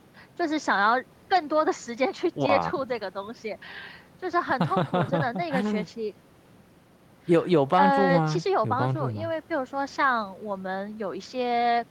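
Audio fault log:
Nothing to log here: the speech recording comes through without any audible faults at any point.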